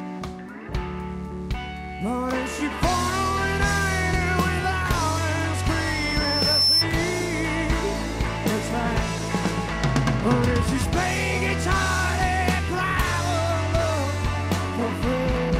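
From 5.69 s to 6.86 s a thin, piercing tone at 5.3 kHz rises out of the sound, swelling over about a second until it sits roughly 5 dB above everything else, then stops. This is loudspeaker feedback squeal: the microphone was picking up the loudspeaker it was feeding, and at that one frequency the loop returned more than it received, so the tone kept reinforcing itself.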